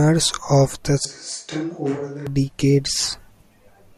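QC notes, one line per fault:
1.05 to 2.27 s, switch to a distant microphone: The speech suddenly turns roomy and hollow and loses its low end. The level drops by about 10 dB. Room noise rises to about 35 dB below the speech. The close pickup likely dropped out, leaving only a microphone farther away. That distant capsule hears more reflections and less direct sound, hence the hollow tone. At 2.27 s the close sound returns just as abruptly.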